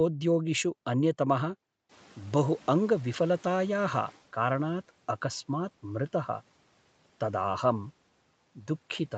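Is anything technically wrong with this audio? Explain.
Yes. Around 2 s the room noise jumps by about 17 dB, and the noise suppressor is caught catching up: from 1.89 to 4.23 s its noise estimate lags, so the noise comes through with less reduction at first, then sinks by about 9 dB as it adapts over 2.34 s. Unlike gain pumping, the speech level stays steady and only the noise fades.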